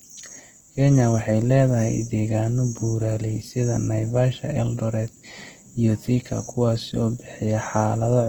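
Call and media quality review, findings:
Grainy, rough texture on speech throughout, plainly audible; full bandwidth kept, content reaching about 20.1 kHz. Likely Opus compression, CELT mode: bands short of bits filled by folding or noise, fitting a rate near 16 kbps. Less MP3-style swirl, few spectral holes.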